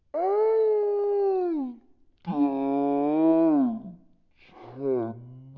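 From the very first moment to the end, this speech is running at a wrong sample rate. Everything crawls at a third of normal speed and sits about 19 semitones low, a bit over an octave and a half down. Speed and pitch drop together like that when samples get played back slower than they were captured with no conversion in between, which fits 48 kHz audio being played out at 16 kHz.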